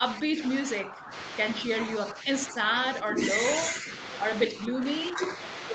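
From 0.0 to 1.1 s, from 1.65 to 3.2 s, from 3.71 to 3.9 s and from 4.5 to 5.22 s, the speech keeps dipping in level. The deepest drops reach about 10 dB, and the short third one only about 5 dB. This sounds like speech suppressed in double talk. The echo canceller likely heard the far end at the same time and mistook this talker for echo. So it turned the talker down in patches.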